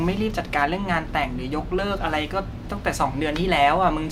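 No technical faults can be heard anywhere in the speech recording.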